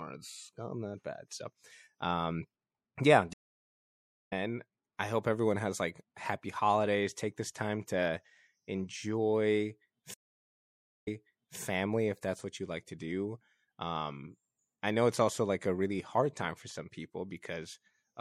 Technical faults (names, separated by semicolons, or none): MP3 compression; stream reconnect